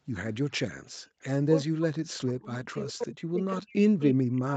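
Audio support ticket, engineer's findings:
Background gated by the echo canceller, 1.0 to 1.18 s: canceller clamps mic gain hard while far-end playback is active. Room tone drops by about 33 dB for around 150 ms in total, then recovers when the canceller releases.

Speech suppressed in double talk, 1.64 s to end of clip: likely the canceller failing to separate near-end talker from loudspeaker echo during simultaneous speech, so both get attenuated. Near-end speech dips, deepest cuts around 40 dB.

Echo leak, 3.01 to 3.05 s: residual echo likely passing the far-end canceller on a speakerphone. Brief scrap of delayed speech, delay 355 ms, level roughly 30 dB below the direct speech.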